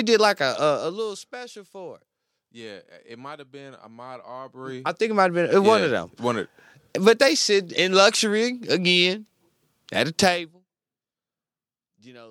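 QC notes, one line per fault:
0.66–1.28 s, zipper noise: after "did like a", level drops about 15 dB in 1 dB steps, around fifty per second. Each unsmoothed step clicks.
4.44–5.1 s, zipper noise: level rises about 15 dB before "it might have been". Same stepped ticking.
10.24–10.62 s, zipper noise: after "at a", a drop of about 25 dB zips audibly.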